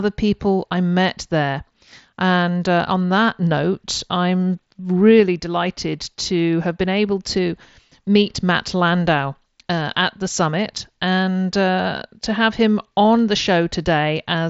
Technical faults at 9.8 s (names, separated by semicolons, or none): none